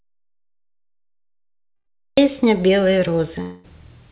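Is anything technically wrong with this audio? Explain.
Yes. The clip opens in complete silence from 0 to about 2.18 s. The audio is already cut when it starts, most likely an audio dropout to silence from a lost input. No room tone is audible.

Inside that stretch, at 1.76 to 1.88 s, there is a burst of packet loss. About 100 ms never arrived, and the receiver filled the gap by extending and fading the last sound.

From 3.42 to 3.66 s there is a concealed gap of about 0.22 s, likely a long network dropout. The last sound is stretched into a fading buzz or hiss. The speech then resumes with that part missing.

The audio has no content above 4 kHz, which fits the narrowband G.711 call codec.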